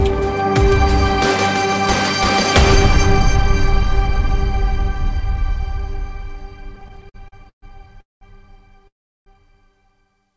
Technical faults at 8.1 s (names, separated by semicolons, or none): call audio freeze